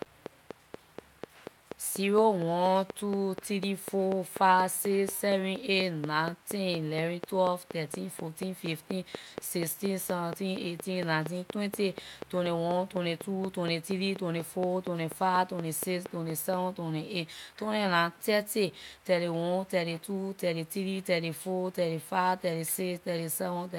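A train of clicks runs from 0.02 to 16.5 s: regular ticks about four per second, roughly 70, standing well above the speech, likely from electrical interference or a faulty connection.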